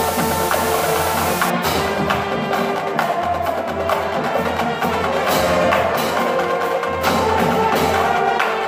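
From 0.0 to 1.5 s the audio has low bit depth with dither: only 5 bits plus dither leave a steady hiss not far below the signal, seen as flat broadband fill on a spectrogram.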